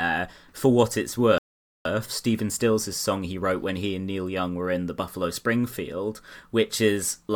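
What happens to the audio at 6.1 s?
Nothing goes wrong at 6.1 s; the speech carries on intact through that moment.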